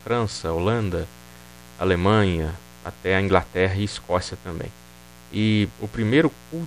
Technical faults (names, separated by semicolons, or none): mains buzz